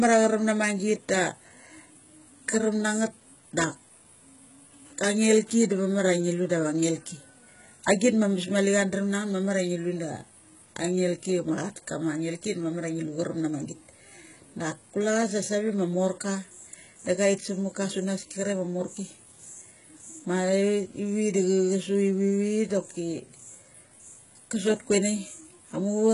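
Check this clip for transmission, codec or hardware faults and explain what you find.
One codec fault runs through the whole clip: the sound points to a very low-bitrate encoder, likely HE-AAC compression at around 12 kbps. The treble is rebuilt from copied lower bands rather than coded, so sibilants turn gritty and metallic, harmonics mismatch across the crossover, and nothing survives above 11 kHz.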